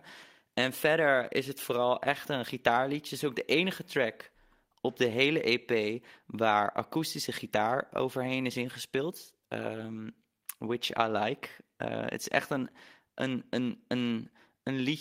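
Nothing stood out as a technical fault on listening to this speech recording.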